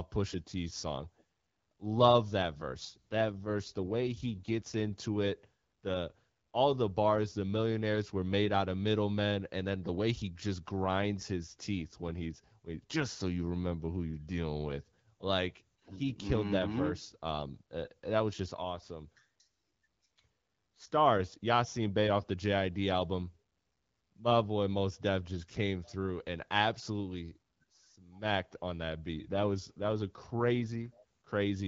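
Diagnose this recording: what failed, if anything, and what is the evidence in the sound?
The failure is an AMR rate drop, a network-side fault acting on the codec. From 2.70 to 4.96 s and again from 29.19 to 30.89 s, the speech turns rougher and more synthetic, with no gap and no change in bandwidth, then returns to its earlier clarity. That pattern fits the link forcing the AMR-WB encoder from 12.65 down to about 8.85 kbit/s, spending the freed bits on error protection, while the wideband path otherwise carries only light coding damage.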